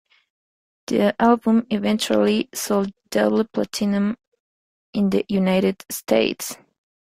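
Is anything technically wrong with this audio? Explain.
No, nothing in this speech recording indicates a technical fault.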